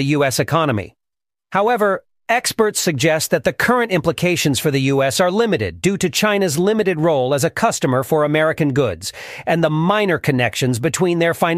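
No technical faults can be heard anywhere in the recording.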